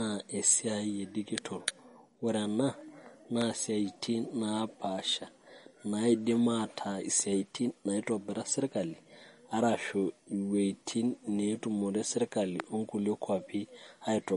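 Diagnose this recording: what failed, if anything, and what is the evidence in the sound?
Codec stage: it's likely MP3 compression, starved of bits, around 40 kbps by the sound. Nothing survives above 10.6 kHz, and the speech has that watery, swirly smear throughout.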